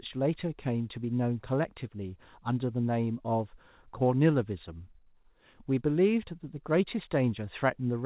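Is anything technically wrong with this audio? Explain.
No, nothing stood out on listening to this speech clip, which comes through a G.711 mu-law call path at 64 kbps with nothing above 4 kHz, as that codec's telephone band normally gives.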